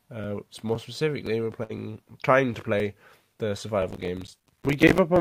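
At 1.63 s a burst of packet loss opens a gap lasting until about 1.72 s. The receiver fills roughly 58 ms by stretching the last sound and fading it, then skips ahead, dropping about 60 ms. Unlike a click or a cut, it is a smooth fading hold followed by a jump.

From 3.90 s to 4.98 s, processor overload crackle rides over the sound. Buffers of around 5 ms miss their deadline, about fifty of them, each leaving a hard-edged sliver of silence. These many tiny gaps produce gritty tearing, not one softened gap.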